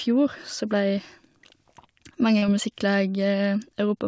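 Short concealed packet loss at 2.38 to 2.44 s: about 40 ms of audio missed the decoder, so the receiver stretched the preceding sound across the gap and blended back into the real signal, leaving a brief smeared wobble within sound capped at 8 kHz, which fits a wideband call codec such as G.722.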